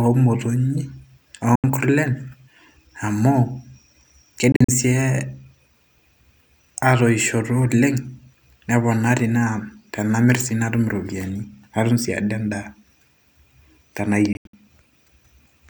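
Speech, with three holes where the sound drops to silence and resumes further along, as if it had played on: 1.55 to 1.64 s, a broken-up stretch from 4.52 to 4.69 s, and 14.33 to 14.54 s. This is likely Bluetooth dropout, with packets arriving too late and being thrown away.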